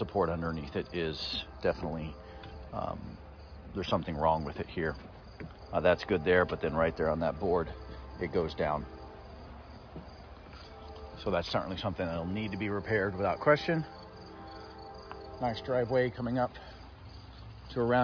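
Listening closely, nothing in the audio stood out as a technical fault at any point.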